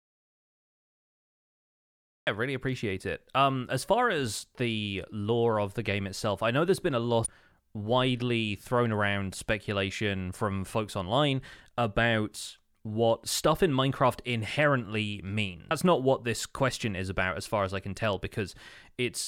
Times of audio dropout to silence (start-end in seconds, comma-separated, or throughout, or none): 0.00-2.27